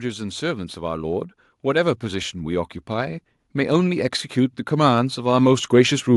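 From 0.05 s to 6.09 s the speech shows automatic gain rising. The gain control judged the input too quiet and kept lifting its gain, about 11 dB in total, in one slow climb across nearly the whole clip. Voice and room noise swell together. That separates it from compressor pumping, which rises and falls with each phrase, and from a speaker simply getting louder, which would leave the background noise where it was.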